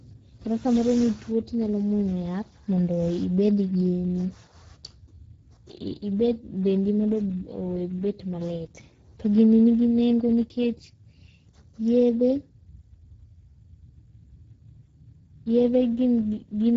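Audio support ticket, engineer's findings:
Speex codec damage across the whole speech clip. Voice hoarse and noisy, plainly audible at all times. Sound consistent with Speex in wideband mode at a low setting, around 10 kbps.

Top band: no content above 7.7 kHz. The region above 4 kHz sounds like shaped noise, not real speech detail. This is the codec's cheap high-band fill at a low bit budget.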